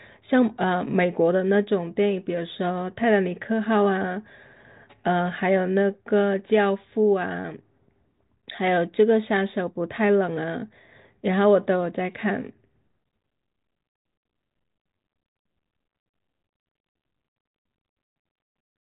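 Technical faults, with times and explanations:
No technical faults can be heard, so there are no times or explanations to give.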